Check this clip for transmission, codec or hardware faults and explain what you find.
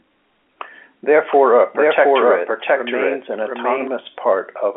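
One fault is present: a doubled audio track from 1.31 s to 3.87 s, carried over a telephone-band line of roughly 300 Hz to 3.4 kHz, consistent with G.711 A-law. The speech is likely captured a second time through a slower path. A dry, equally bright copy at about the same level trails the original by roughly 0.7 s, so the speech overlaps itself and the echo starts and stops abruptly. On a spectrogram every syllable pattern repeats about 0.7 s later with the same shape. The waveform shows matching envelopes stacked and offset.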